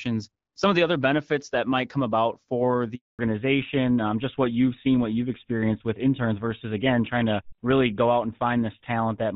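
At 2.95 s, right after "might come about for", the sound cuts out in a handover gap. The call is switching networks and no speech frames arrive. The audio dies within a few tens of milliseconds. It stays silent for 240 ms, until 3.19 s, and that stretch is lost.

From 3.19 s to the end, the call shows a fallback to narrowband. Before the gap, the AMR-WB HD Voice path carries full, clear speech. Afterwards, nothing above 4 kHz remains. The voice turns duller and rougher, which points to an older codec such as GSM full rate.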